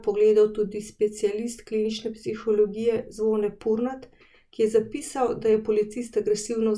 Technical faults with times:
none

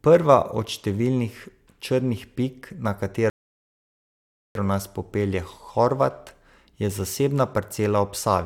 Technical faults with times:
3.30-4.55 rebuffering stall

